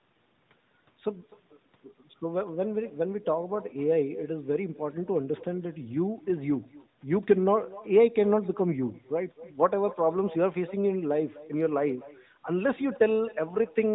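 Throughout the speech, the far end plays the call over a loudspeaker and nothing cancels what its microphone picks up. This is echo with no canceller: every phrase returns about a third of a second later as a faint, hollow copy, about 20 dB below the original.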